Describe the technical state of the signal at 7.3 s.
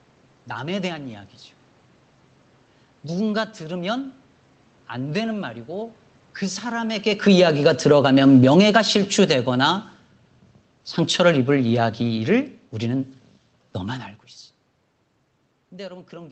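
At 7.3 s the automatic gain control is falling, a ramp running from 7.13 to 9.94 s. Having judged the input too loud or its background noise too strong, it steadily lowers gain by about 7 dB, so the speech and the room noise behind it sink together.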